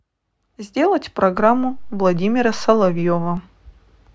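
A DC step hits this speech recording at 1.38 s, when the waveform's zero line jumps by about -27 dBFS, giving a low thump, then ends at 3.37 s.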